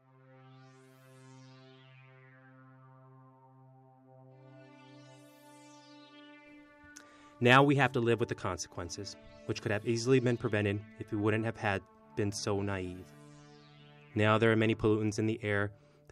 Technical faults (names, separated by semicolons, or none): none